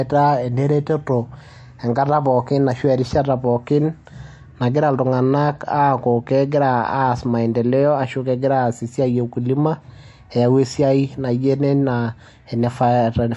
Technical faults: MP3 compression

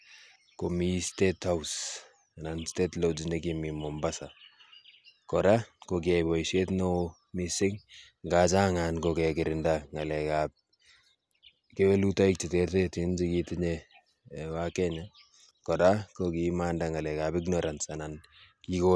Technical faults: none

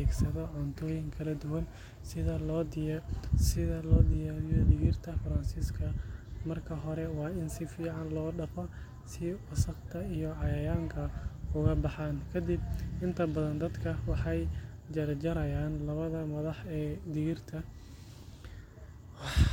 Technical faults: none

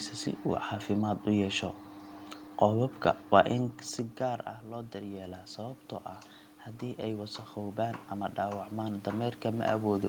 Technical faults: automatic gain rising

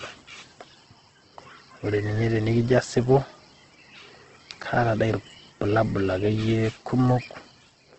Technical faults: Opus compression

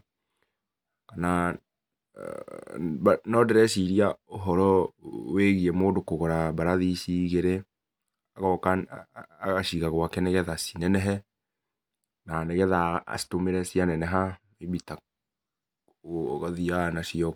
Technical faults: de-emphasis applied wrongly

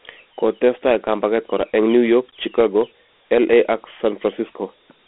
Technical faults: Dialogic VOX ADPCM

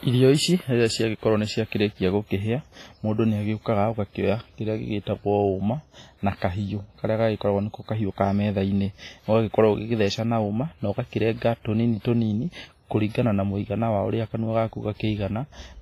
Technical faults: WMA compression

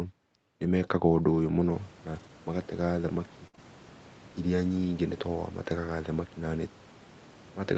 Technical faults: lost packet rebuilt from error correction; burst of packet loss; short concealed packet loss

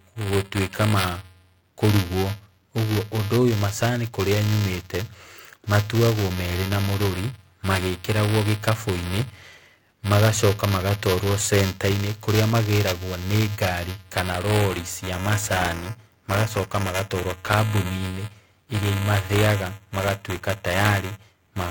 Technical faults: buffer tearing

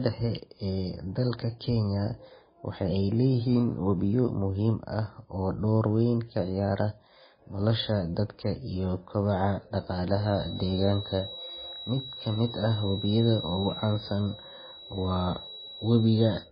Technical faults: MP3 compression; feedback whistle

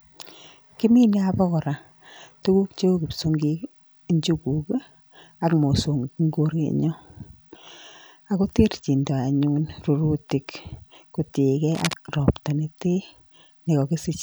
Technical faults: cable scratch noise

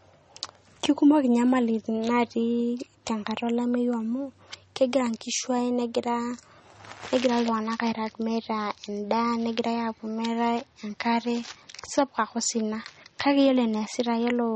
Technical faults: MP3 compression

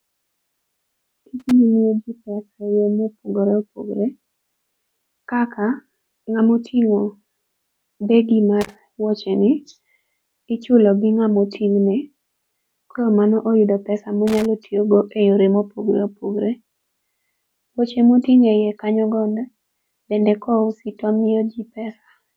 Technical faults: loose connector crackle

